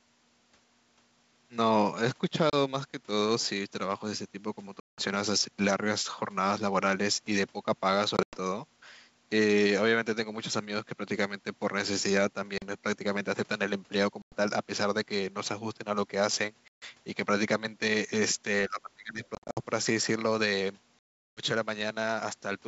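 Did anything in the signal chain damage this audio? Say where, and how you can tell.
Yes, at the network stage: packet loss on an ADPCM call. Hard-edged silent gaps of 30 to 380 ms start at 2.50, 4.80, 8.17, 12.58, 14.22, 16.68, 19.35 and 20.99 s, with the 8.17 and 19.35 s losses scattered. After each gap the decoder's predictor and step size no longer match the sender's, so the sound resumes with brief distortion.

At the call-processing stage, speech is suppressed in double talk from 18.68 to 19.22 s. The level dips, by about 20 dB at its deepest, over roughly half a second. This likely comes from an echo canceller that could not separate the near talker from loudspeaker echo and attenuated both.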